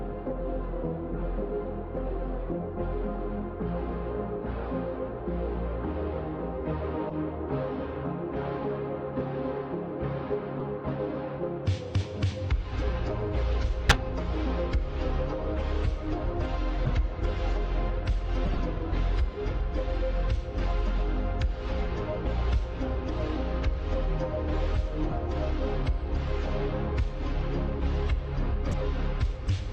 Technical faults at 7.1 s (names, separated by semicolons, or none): corrupt frame decoded